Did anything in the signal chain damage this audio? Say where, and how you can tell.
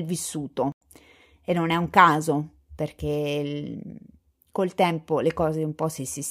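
Yes. At 0.72 s the speech drops abruptly into dead silence and returns at 0.81 s, a clean gap of about 0.1 s with no fade or smearing, after which the speech carries on without any shift in timing. That is a corrupt frame muted at the codec stage: damaged bits in the compressed stream made the decoder reject the data, and the player substituted silence. The gap's length fits two consecutive frames.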